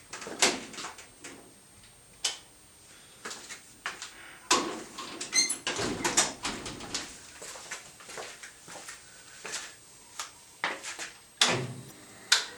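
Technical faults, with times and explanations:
throughout: switching supply whistle. A thin, high whistle sits under the whole clip, wandering between 8.37 and 8.72 kHz at roughly 25 dB below the main sound. A switching power supply falling into an audible burst mode, or beating against a second supply, puts its switching energy into the audible band. As its load shifts, the pitch drifts. On a spectrogram it is a narrow, slightly wavering horizontal line spanning the full length.
11.87–11.92 s: damaged data in a compressed stream. A brief glitch breaks in. Some of the compressed data at this point was corrupted, so the decoder misread those frames, lost sync and skipped ahead to the next valid frame header. On a spectrogram this shows as a short disturbance. On the waveform there is a 44 ms patch of out-of-place samples.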